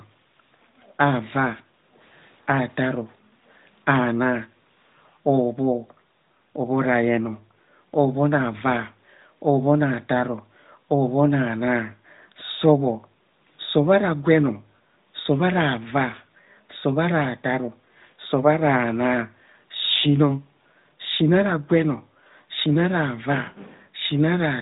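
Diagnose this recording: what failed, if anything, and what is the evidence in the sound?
The failure is in call processing: the background is gated by the echo canceller. From 1.61 to 1.97 s and again from 22.09 to 22.49 s, the room sound ducks by about 10 dB and then recovers, a sign that the canceller was suppressing the microphone while the far end played. Unlike a network dropout, the sound never goes fully silent and the narrowband mobile codec's band limit near 3.8 kHz stays constant throughout.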